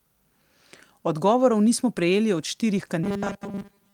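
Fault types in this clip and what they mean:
Lost packet rebuilt from error correction: at 1.97 s, before "prejeli od", and 2.77–2.83 s, after "nismo prejeli od", low-bitrate backup copies fill gaps, sounding briefly rougher.
Robotic sound from repeated short buffers: from 3.04 s onward, a rigid 200 Hz buzz, likely from repeating 5 ms snippets while most real audio is skipped.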